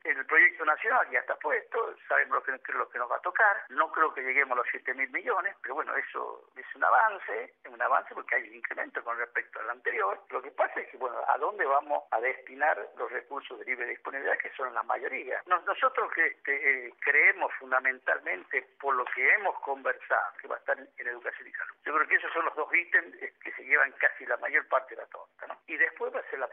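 No technical faults can be heard at any point in the audio.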